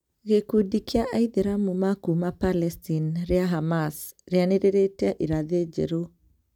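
No faults can be heard anywhere in the recording.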